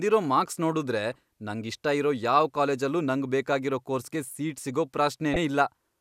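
At 5.33 s, near the end of the speech, there is damaged data in the compressed stream. It lasts only about 33 ms, until 5.37 s. Some bytes in the encoded audio are corrupt. The decoder cannot read those frames properly. It loses its place and hunts for the next valid frame header before playback recovers. The result is a short chirp or blip in the speech.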